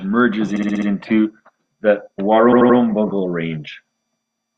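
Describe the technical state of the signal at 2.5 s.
A block of compressed frames was delivered more than once, so from 2.52 to 2.77 s the decoder replays the same 85 ms stretch three extra times. These repeated frames are heard as a stutter, and they add 256 ms to the clip.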